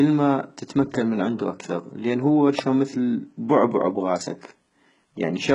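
From the first moment the speech carries heavy codec damage, most likely HE-AAC compression at a very low bitrate, something like 12 kbps. Only the lower band is really coded; the treble is rebuilt by copying lower bands upward under a coarse envelope, so it doesn't belong to the speech. The s sounds come out gritty and lispy, with a metallic sheen, and nothing at all reaches above about 11.1 kHz.

At 2.59 s there's a sharp snap sitting on top of the speech, over in under 10 ms. That's likely an electrical switching spike, where a nearby switch, motor or static discharge throws off a brief arc and the audio line picks it up. It doesn't blend into the speech at all. It's simply added on top as a tight, hard click.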